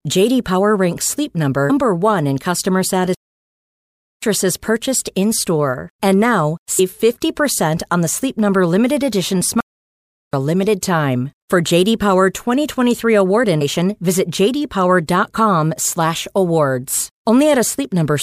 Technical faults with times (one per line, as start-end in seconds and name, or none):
1.69 compressed frames skipped
3.14-4.22 playback stall
6.78 compressed frames skipped
9.61-10.33 playback stall
13.60 compressed frames skipped